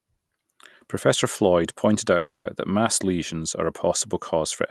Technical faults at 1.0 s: none

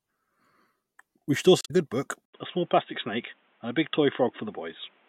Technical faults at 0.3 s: none

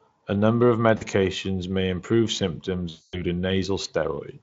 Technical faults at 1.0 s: VoIP packet loss concealed by the speech codec

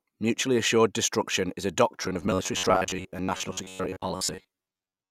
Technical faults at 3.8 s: robotic sound from repeated short buffers

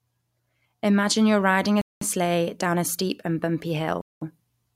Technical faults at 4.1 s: gap between chunks

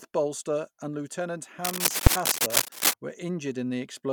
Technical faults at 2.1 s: cable scratch noise; invalid numbers at full scale

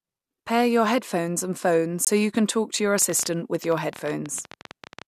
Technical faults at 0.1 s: none

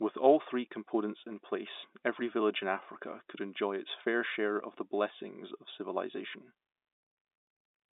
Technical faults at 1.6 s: none

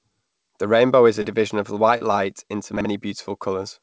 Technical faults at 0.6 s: none

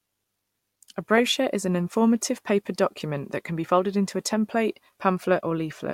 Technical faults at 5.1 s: none

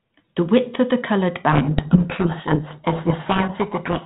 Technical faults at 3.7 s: codec payload misread

